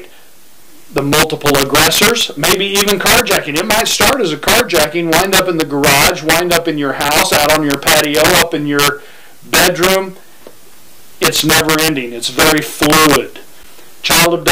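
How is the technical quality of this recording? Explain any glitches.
The technical quality is poor because of integer overflow running through the whole recording. The signal is driven about 13 dB past the integer limit, and instead of being held at full scale, the loudest few percent of samples wrap around to the opposite sign. Every loud peak therefore jumps across the entire range, producing violent, harsh cracks far sharper than ordinary clipping whenever the sound gets loud.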